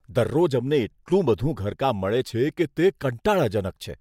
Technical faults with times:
2.34-3.00 drift correction step

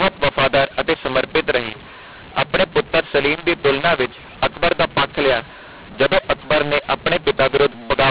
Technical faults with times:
0.00-8.11 mu-law and A-law mixed up

